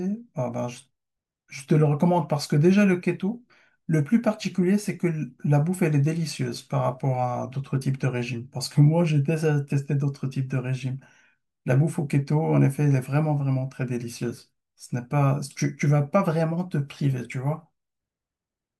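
No technical faults can be heard anywhere in this speech recording. Nothing in the audio stands out as a problem for a fault-focused listener.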